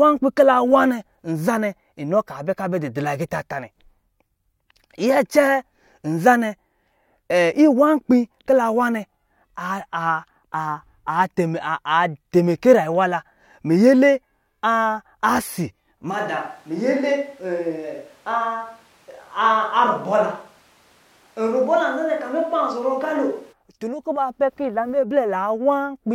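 At 16.12 s the speech abruptly turns roomy and hollow, loses low end, and drops about 5 dB in level, with background noise rising to roughly 35 dB below the speech. It snaps back at 23.51 s. This is a switch to a distant microphone, likely because the close mic's signal failed or was left out. On a waveform the envelope steps down and the gaps fill with noise. A spectrogram shows thinner bass and smeared, reverberant tails.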